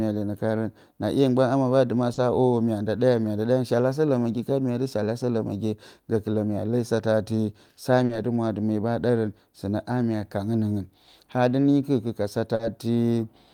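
Short concealed packet loss occurs three times, at 2.13 s, 8.05 s and 12.55 s. Each time, 40 ms of the speech arrived too late to decode, so the receiver extrapolated the preceding sound to bridge the gap before blending back, leaving a brief smear or wobble.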